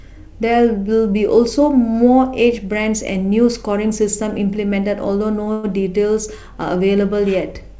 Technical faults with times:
5.44-5.48 short stall from a late packet
5.52-5.65 call audio freeze

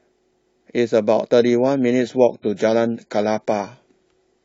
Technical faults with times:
1.39-4.44 adaptive stream at a lower bitrate

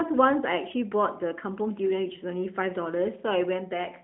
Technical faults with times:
none

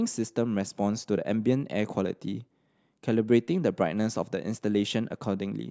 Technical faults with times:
none

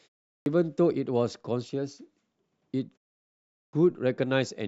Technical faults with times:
0.37-0.46 clipped start after a pause
3.64-3.73 clipped start after a pause

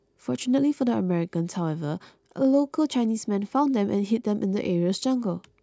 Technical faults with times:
none

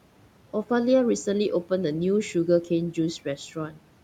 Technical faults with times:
3.55-3.81 speech cut by the noise suppressor

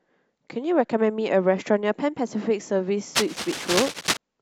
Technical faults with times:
3.15-4.17 cable scratch noise

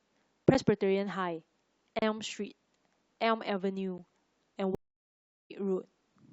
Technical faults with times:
0.54 block of digital silence
1.99-2.02 block of digital silence
3.98 block of digital silence
4.75-5.52 stream reconnect

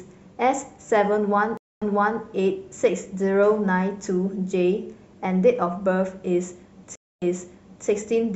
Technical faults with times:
1.57-2.21 stream reconnect
6.95-7.88 stream reconnect

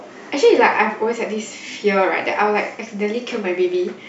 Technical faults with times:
none

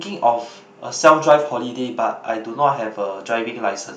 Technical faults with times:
1.06-1.33 microphone overload

